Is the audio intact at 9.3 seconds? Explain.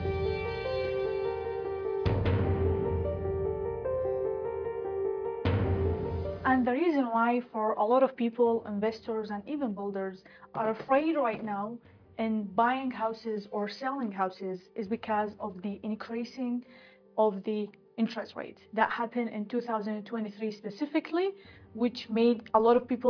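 Yes, the audio at 9.3 seconds plays through cleanly, with no dropout, click, distortion or other fault at that moment.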